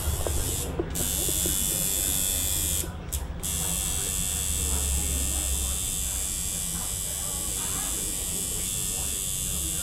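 No technical faults are audible anywhere in this recording.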